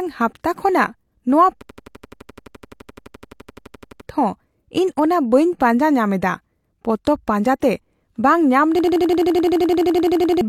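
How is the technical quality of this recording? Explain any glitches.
The recording has two serious freezes and one brief codec flaw.

From 1.62 to 4.01 s, just after "ᱦᱟᱯᱛᱟ ᱠᱷᱚᱱᱟᱜ ᱱᱚᱶᱟ", there is a system hang loop. The system stalled while the audio hardware kept replaying its ring buffer. An 85.33 ms slice repeats 28 times, a stutter at 11.7 Hz. That fits a 4096-sample buffer. About two seconds of speech are lost. It happens again from 8.79 to 10.41 s, after "ᱵᱟᱝ ᱧᱟᱢ". This time it repeats 19 times, and about 1.5 seconds are lost.

From 7.60 to 7.62 s there is pre-echo. A transform codec spreads its quantisation noise across a whole block. Here a sharp attack sits late in the block. The noise meant for the loud part spills into the quiet moment before it. The result is a short 24 ms hiss ahead of the attack, which sounds softened or smeared.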